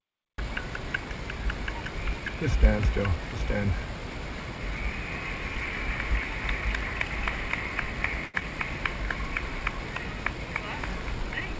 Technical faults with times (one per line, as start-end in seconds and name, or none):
8.26-8.36 short stall from a late packet
8.40-8.43 short concealed packet loss